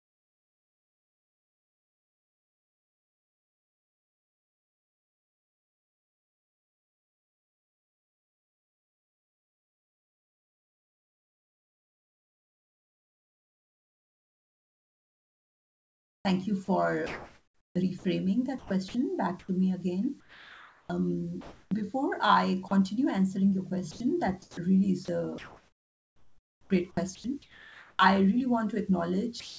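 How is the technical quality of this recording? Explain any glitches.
The recording is heavily disrupted by the sender's voice detector, which repeatedly swaps real sound for synthetic noise. The audio runs through a G.722-style call path with nothing above 8 kHz, so the spectrogram is flat-topped at 8 kHz throughout.

Sound chopped by the voice detector occurs at 0.0–18.04 s (about 17 s of it replaced), at 18.58–19.48 s just before "me again", and at 23.91–27.99 s just after "answering your". The detector likely toggled transmission on and off, so quiet syllables and word edges were filled with comfort noise. The audio sounds choppy. On a spectrogram, detailed harmonic patches alternate with smooth, uniform noise blocks.

Sound dropped by the voice detector occurs at 20.20–20.89 s just after "me again", at 22.68–22.71 s, and at 29.40–29.57 s. Here the detector likely mistook quiet speech for background and stopped sending, losing about 430 ms, 30 ms and 171 ms of sound. 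Speech gives way to steady hiss. The waveform drops abruptly to a low, even band.

Comfort noise in place of the background occurs at 21.41–21.71 s. During a pause, the real background was likely replaced by synthetic noise, shifting the level by about 8 dB. That background sits about 42 dB below the loud parts. It sounds featureless. The spectrogram shows a smooth, textureless wash instead of the varied background.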